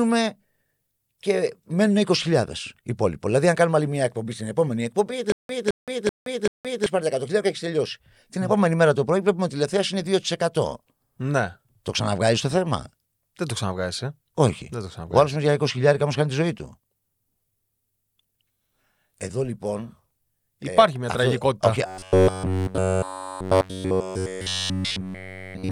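From 5.32 to 6.86 s the speech breaks into a stutter with silent gaps. A fragment of about 214 ms plays, then about 171 ms of dead digital silence follows, and the cycle returns every 385 ms, four times in all. The likely cause is a stalled player or stream that replays its last fragment at each retry and then runs dry, so the speech meant for that span is lost. The fragment is long enough to hear as a repeat, and the true silence between bursts sets this apart from a buzzing fault.

From 21.86 s to the end, at 25.71 s, the speech turns into robotic sound from repeated short buffers. A rigid, metallic buzz at 93.8 Hz runs across the whole stretch. It still tracks the rough shape of the speech. That rate fits a block of about 10.7 ms being repeated, likely because new audio arrived too rarely and the player kept reusing the last buffer. There are no silent gaps here, and the loop is too short to hear as a repeat, so it comes across as a fixed tone rather than a stutter.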